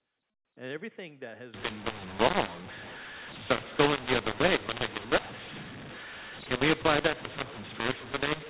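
Speech over G.711 telephone coding, where from 1.54 s, just after "everything that has", the A-law stream is decoded as mu-law, a mu-law and A-law mix-up that scrambles levels into harsh distortion and fills pauses with noise.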